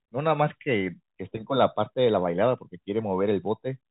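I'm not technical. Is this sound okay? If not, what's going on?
Yes, this speech came through without any technical problems, and its narrow, phone-like quality is simply the normal sound of G.711 telephone coding, which keeps nothing above about 3.8 kHz.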